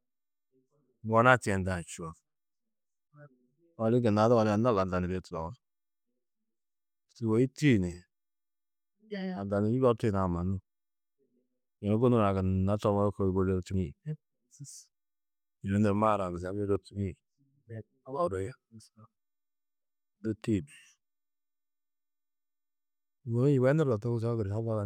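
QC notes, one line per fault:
1.75 s, 13.74 s, 16.76 s: dropped buffer (overrun). The software likely failed to collect its samples before the hardware overwrote them, so roughly 10 ms at the first and 20 ms at the others vanishes. The joined edges produce a small skip forward in the speech.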